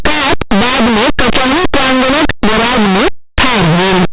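From start to end, linear audio read as companded: linear 8-bit samples decoded as mu-law throw values just on one side of zero to the largest outputs, a harsh roar, not 8-bit's faint grain.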